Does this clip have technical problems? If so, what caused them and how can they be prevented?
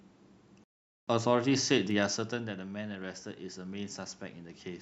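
Yes. A playback stall cuts the speech off mid-flow at 0.64 s, and everything goes silent for about 0.44 s until 1.08 s, when the sound picks up again. Unlike a short dropout, which lasts only milliseconds, this halt is long. Unlike a natural pause, it takes the room noise with it, leaving silence. The player likely ran out of buffered data or had its audio thread blocked. A larger playback buffer and a high-priority audio thread would prevent it.

Automatic gain rising follows a level drop around 2.0 s, where the talker moves back and the input falls by about 11 dB. From 2.30 s to the end of the clip, the gain control gradually lifts the level to compensate. The giveaway is that the room noise swells along with the speech. A talker simply leaning closer again would raise the voice but leave the background steady. Capping the maximum gain or slowing how fast the control adapts, along with a steady microphone distance, would prevent it.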